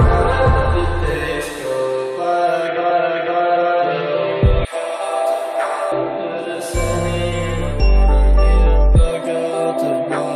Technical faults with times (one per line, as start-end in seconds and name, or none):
0.31 damaged data in a compressed stream
2.89 damaged data in a compressed stream
7.70 damaged data in a compressed stream